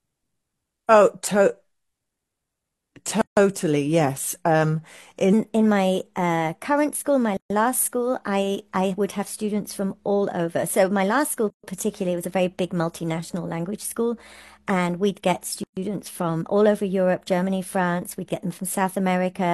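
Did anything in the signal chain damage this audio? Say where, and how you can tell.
Yes, two separate problems. The first is a gap at a join of encoded pieces, at the codec or file-assembly stage. The speech drops into dead silence at 3.21 s for about 155 ms, then at 7.37, 11.50 and 15.64 s for about 133 ms each, a steady 4-second spacing. The edges are smeared, and the speech picks up right where it stopped. That points to fixed-length chunks encoded separately and stitched together with the encoder's start-up delay and end padding left in.

Second, there's a section at the wrong speed, starting at 5.33 s and running to the end. From there the speech plays 1.16 times too fast, so it sounds rushed and sits about three semitones higher, with pitch and tempo shifting together. That's likely a clock mismatch at the editing or playback stage, where that stretch was handled at a different rate than it was recorded at.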